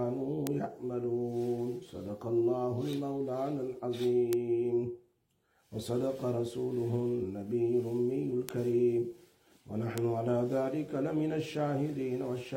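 Bit error spikes tick at 0.47, 2.93, 4.33, 8.49 and 9.98 s, peaking around -9 to -21 dBFS. Each is a lone one- or two-sample jump with no gap, unlike a dropout click.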